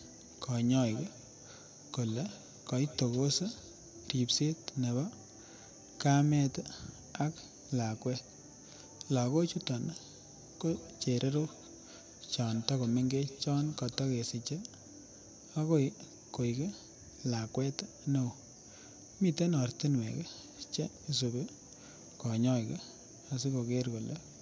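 From 0.74 to 3.82 s, and again from 10.15 to 14.12 s, there is feedback echo between two devices. One device's microphone picks up another's speaker, so the speech returns roughly every 150 ms. The repeats peak about 21 dB, then about 23 dB, below the speech.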